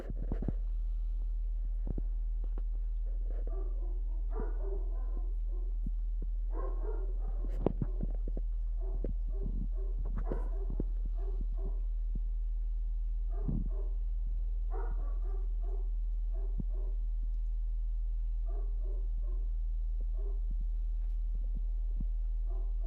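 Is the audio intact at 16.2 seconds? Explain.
No. At 16.2 s, as through the whole clip, there is mains hum: a ground loop or nearby transformer is leaking the 60 Hz power line into the signal, giving a steady low drone roughly 25 dB below the audio. A spectrogram shows an unbroken horizontal line at 60 Hz.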